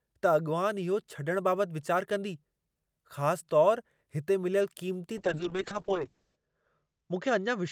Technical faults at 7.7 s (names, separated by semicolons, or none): call bitrate drop